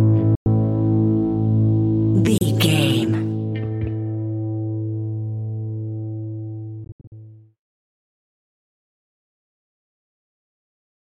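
Audio packets likely failed to reach the headphones in time over a Bluetooth link, producing Bluetooth dropouts: the output cuts abruptly to silence and then resumes further along, as if it had kept playing. Gaps fall at 0.35 to 0.47 s (about 107 ms missing) and 2.38 to 2.42 s (about 30 ms). Between 6.84 and 7.12 s, several shorter holes are scattered over about 270 ms, the longest about 76 ms.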